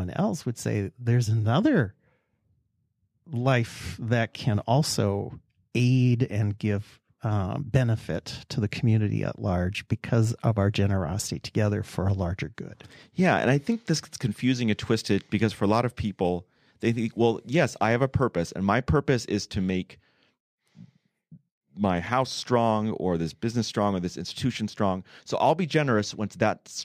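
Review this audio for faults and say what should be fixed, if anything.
Nothing here needs fixing, since no technical faults turn up anywhere in this speech recording.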